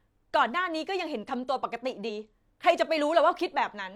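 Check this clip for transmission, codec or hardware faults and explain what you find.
One fault stands out in the speech: damaged data in a compressed stream, from 2.05 to 2.10 s. Corrupted bytes there make the decoder misread the affected frames, lose sync and hunt for the next valid frame header, so roughly 50 ms comes out as a brief glitch. On a spectrogram it shows as a narrow vertical disturbance breaking the harmonic bands. The waveform has an abrupt disruption with hard discontinuities at both edges.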